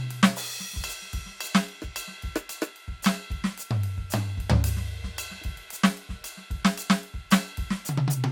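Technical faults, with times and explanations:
Throughout: generation loss. The music sounds swirly, smeared and hollow, with blurred attacks, and nothing is heard above 18 kHz. The damage is heavier than a single lossy encode would leave. The likely cause is repeated decoding and re-encoding, around seven times, with a codec whose character points to MP2 at about 128 kbit/s. Each pass quantises on a shifted frame grid, so noise piles up.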